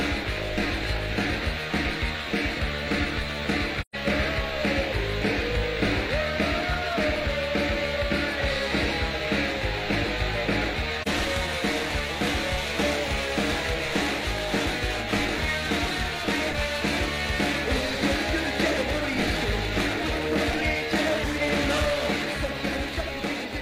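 A high whistle runs through the whole audio. It sits around 15 kHz, wandering between about 13.6 kHz and 15.5 kHz. Its level is roughly 35 dB below the main sound. This is a switching supply whistle. A switching power supply is running in an audible burst mode or beating with another supply. Its tone leaks into the audio path, and the pitch shifts as the supply's load changes. The sound also drops out twice, which is AAC frame loss with muting. The first gap runs from 3.81 s to 3.95 s. About 128 ms are missing, which fits three lost frames of about 43 ms each. The second, at 11.02 to 11.08 s, is a single 42.7 ms frame. The decoder zeroed the spectrum of the missing frames. Overlapping windows then fade the sound out and back in. The longer run becomes a soft-edged hole, and the single frame becomes a brief dip.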